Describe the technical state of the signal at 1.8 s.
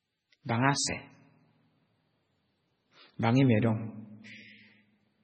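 Heavy MP3 compression, likely from a starved bitrate near 16 kbps, spans the whole clip including 1.8 s, cutting everything above 8.3 kHz and leaving the speech watery and swirly.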